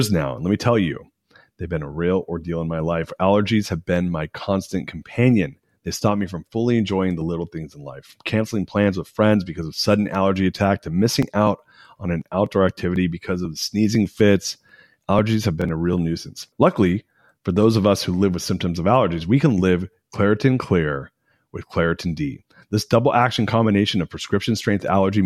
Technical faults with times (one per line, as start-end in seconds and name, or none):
11.22-16.43 periodic USB or driver dropouts
15.61-15.65 Bluetooth stutter